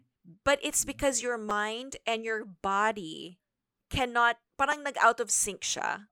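At 1.50 s and again at 4.72 s, a repeated buffer interrupts the speech. Late audio left the device replaying a tiny segment, consistent with a 5 ms buffer, three times in a row, dropping about 10 ms of sound. Each is a sharp click or buzz. The waveform shows identical short cycles with abrupt joins, and the spectrogram shows a thin vertical stripe.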